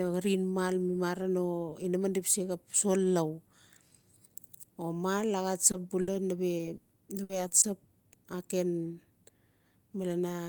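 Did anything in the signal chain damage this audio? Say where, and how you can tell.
Yes. Short concealed packet loss at 5.71 to 5.75 s, in the network stage: about 20 ms of speech never arrived in time. The receiver bridged it by extending the preceding sound and crossfading back, heard as a brief smear or wobble.

Burst of packet loss at 6.01 to 6.09 s, again network-side: 60 ms went missing in one run. Concealment carried the last sound forward while fading it, so a held buzz or dying hiss replaces the lost material before speech resumes further along.

Repeated packet loss (robotic sound) from 6.57 to 7.65 s: five separate gaps totalling 260 ms, the longest 120 ms, so roughly a quarter of that stretch is synthesised. Each patch extends the previous sound before the next dropout hits, giving choppy speech with pieces missing.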